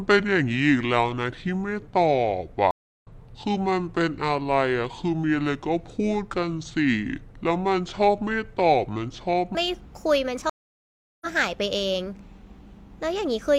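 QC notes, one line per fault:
0.00–9.55 s, section at the wrong speed: the speech runs at about 0.58 times its proper rate, so everything sounds slowed and dragged, with pitch lowered by roughly ten semitones. The likely cause is a playback or editing stage working to the wrong clock, which stretches time and drops pitch together.
2.71–3.07 s and 10.50–11.27 s, stream reconnect: the connection drops, leaving 319 ms and then 718 ms of silence while the player reconnects and starts a new decoder. Each time the sound picks up further on, skipping roughly 0.2 s and then 0.7 s, and the first frame fades back in.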